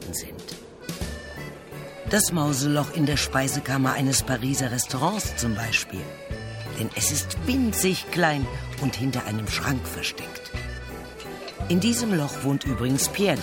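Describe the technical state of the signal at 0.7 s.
At 0.7 s the signal is intact, with no dropout, clipping, glitch or other fault audible at that moment.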